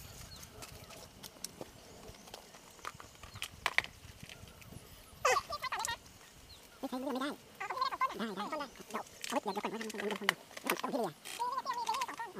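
The whole clip plays at twice the right speed and a full octave high, a classic case of audio read two samples at a time.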